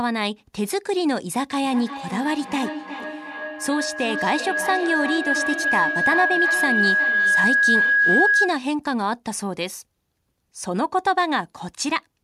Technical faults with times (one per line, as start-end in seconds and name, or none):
1.63-8.73 feedback howl